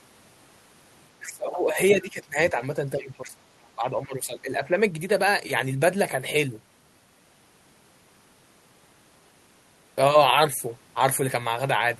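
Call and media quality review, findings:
Speech suppressed in double talk, 1.2–2.57 s, 2.95–3.37 s, 3.76–4.78 s. Near-end speech dips by around 20, 15 and 10 dB respectively while the far end talks. The echo canceller likely cannot separate talker from loudspeaker echo and attenuates both.

Other side's voice leaking through, 1.26–1.32 s, 3.0–3.29 s, 3.62–3.67 s. Brief scraps of the far-end voice sit roughly 20, 25 and 40 dB below the speech. The echo canceller likely leaves residual loudspeaker pickup in the microphone path.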